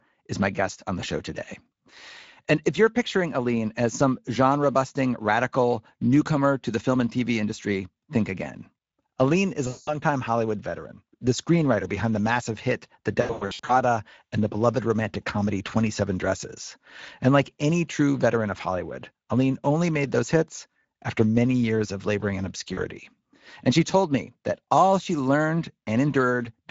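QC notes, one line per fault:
throughout: Speex codec. The speech carries a plainly audible hoarse, noisy grain, the texture of a CELP coder with too few bits left over to model the excitation accurately. A rate of about 17 kbps points to a middle quality setting, so the top band is filled with shaped noise rather than real detail. Unlike packet loss, this colouring is constant from start to finish and never builds or fades.
9.67 to 9.95 s, 13.21 to 13.73 s, 22.73 s: VoIP packet loss concealed by the speech codec. At each point the decoder fills the gap by extending its last pitch and filter, stretching the sound into a buzzy tone or coloured noise that fades as the gain falls frame by frame. The first gap amounts to about 200 ms of missing audio. The second, ending just before "and the beloved romantic", is scattered over nearly half a second, with its longest single dropout about 100 ms. 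The third is brief, about 40 ms, just after "years of laboring in". Because each frame builds on the one before, the speech stays weak or smeared for a short while after the stream recovers. These local, decaying sounds set the dropouts apart from the steady Speex roughness.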